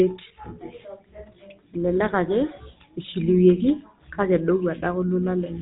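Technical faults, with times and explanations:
Throughout, GSM full-rate codec: the speech is plainly rough and buzzy, with a gravelly grain and nothing above about 3.8 kHz, which fits the 13 kbps GSM full-rate coder. Its excitation is rebuilt from sparse, regularly spaced pulses, and that coarse pulse train causes the buzz. A simple low-pass filter would only dull the sound. Newer telephone codecs would sound smoother and less grainy at a similar bandwidth.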